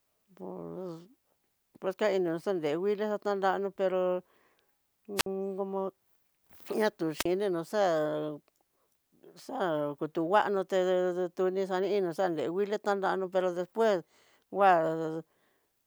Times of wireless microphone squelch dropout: 5.16-5.26, 7.17-7.26

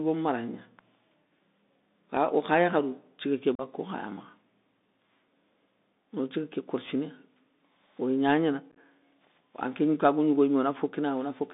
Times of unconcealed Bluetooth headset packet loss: 3.55-3.61, 8.71-8.78

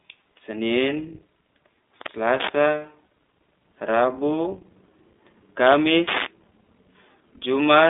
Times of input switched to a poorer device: none

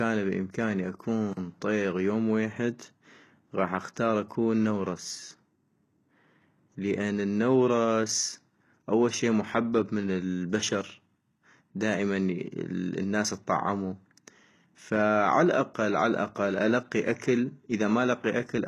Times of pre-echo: 1.33-1.37

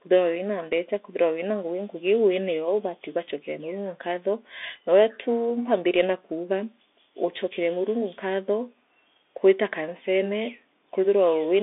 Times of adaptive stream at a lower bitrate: none

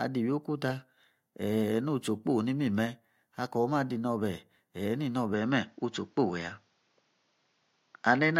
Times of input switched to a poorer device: 5.34-8.39

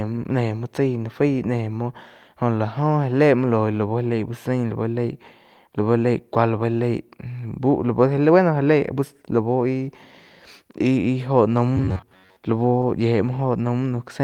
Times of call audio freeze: none

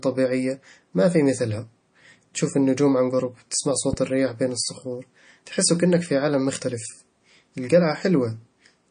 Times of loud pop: 3.93-3.96

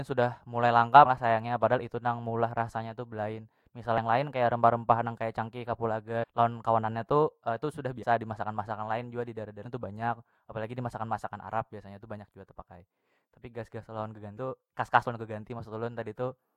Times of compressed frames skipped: 1.05-1.07, 3.98, 6.22-6.24, 8.02, 9.65, 14.36

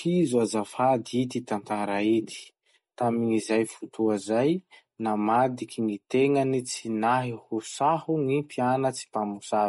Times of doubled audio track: none

